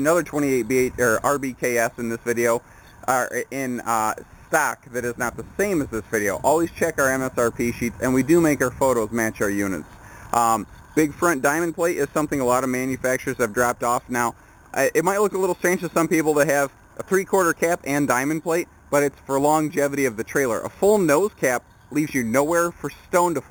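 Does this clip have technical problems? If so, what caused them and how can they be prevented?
Yes. Imaging from sample-and-hold upsampling runs throughout: samples held without smoothing, apparently from an 8 kHz original, mirror the spectrum into 4 to 8 kHz, giving metallic fizz about 15 dB down. Prevent it by upsampling with a proper interpolation (anti-imaging) low-pass filter instead of repeating samples.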